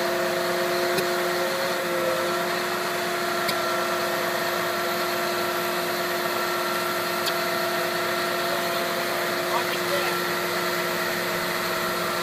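Four short glitches break the audio at 0.96 to 1.00 s, 3.48 to 3.51 s, 7.26 to 7.30 s and 9.72 to 9.75 s, each only 26 to 44 ms long. They come from damaged data in a compressed stream: the decoder misreads corrupted frames, loses sync and resumes at the next valid frame, so the sound breaks briefly there. A plain playback dropout would be a silent gap or dull click, without the decoder losing sync on corrupted frames.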